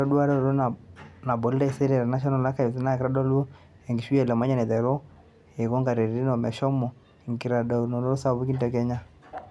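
No technical faults can be heard anywhere in the speech recording.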